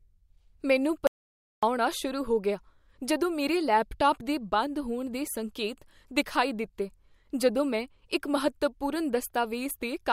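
Just after the 1.07 s mark the speech drops out to silence and doesn't come back until about 1.63 s, so roughly 0.56 s of it is simply gone. It's a dead, total gap with no room tone at all, which is what you get when the input vanishes and the recorder keeps writing silence. The likely culprit is a momentary loss of input: a device disconnecting, a link failing or a mute getting toggled by accident.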